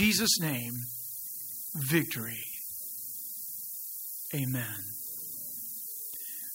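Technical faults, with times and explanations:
Throughout: low bit depth with noise shaping; 5-bit rounding error pushed upward makes steady thin hiss near speech level, filling the spectrogram's top band.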